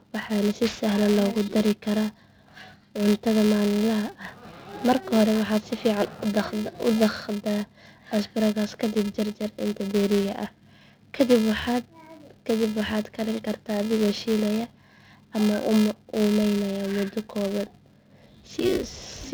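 From start to finish the speech carries a steady buzz of regular ticks at about 375 Hz, growing louder on stressed syllables and fading in pauses. This is a filter restarted on every block. It discards its state at each boundary and starts from silence, so every block opens with a small transient. The tick rate fits a 128-sample buffer. Beneath it, the G.722 wideband telephone coding at 64 kbit/s adds at most a faint upper-band hiss.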